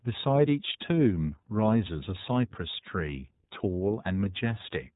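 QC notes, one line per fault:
Throughout, iLBC codec: the speech carries nothing above 3.8 kHz and has a plainly audible rough, slightly synthetic edge. Each 30 ms frame's excitation is coded independently of the last, and the grain suggests the 13.33 kbps mode.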